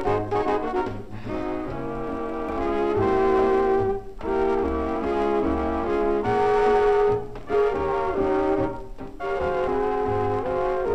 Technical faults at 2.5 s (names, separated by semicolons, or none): damaged data in a compressed stream